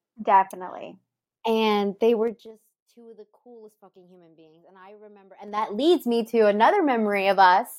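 A gain change applied in coarse 3 dB steps, with no smoothing between them, produces zipper noise twice in this speech. From 2.23 to 2.55 s, just before "two of the coolest", the level drops by roughly 25 dB at about twenty steps a second. Each jump leaves a small click, heard as a rapid ticking. The reverse happens from 5.34 to 5.71 s, after "I remember" and before "leads me to", as the level climbs back.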